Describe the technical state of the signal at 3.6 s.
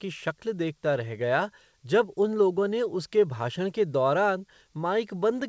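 At 3.6 s the speech is intact, with no dropout, glitch or distortion, only the steady band limit of the call path, with nothing above about 8 kHz.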